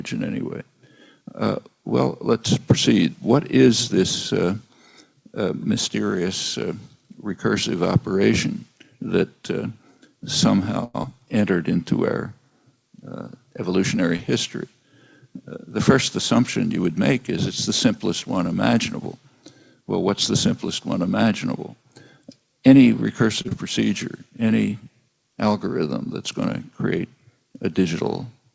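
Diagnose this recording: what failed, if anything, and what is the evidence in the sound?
Call audio freeze, at the network and jitter buffer stage. From 10.84 to 10.96 s the sound is drawn out as a fading buzz for 100 ms, with about 10 ms of near-silence. Then it resumes where it stopped, with nothing lost. Delayed packets likely emptied the buffer.

Short concealed packet loss, a network fault covered by the decoder. It occurs at 11.02–11.05 s, 14.17–14.21 s and 23.49–23.53 s. Each is a brief smear or wobble. Between 20 and 40 ms of audio never arrived, and the receiver patched only 13 to 20 ms of it by extending the previous sound before blending back.

Jitter buffer speed-up, in the receiver's buffer management. From 13.72 to 16.33 s the sound runs at 101% speed and sheds around 50 ms. From 22.58 to 23.23 s it runs at 105% and loses roughly 40 ms. Pitch stays put because whole pitch periods were cut to drain surplus delay.

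Short stall from a late packet, also at the jitter buffer. At 23.42–23.47 s a sound is held 27 ms too long, with a slight buzz. The due packet was late, so the receiver stretched the last audio until it came. Nothing is missing. All of this sits inside an 8 kHz band ceiling, which fits a 64 kbps G.722 call path working normally.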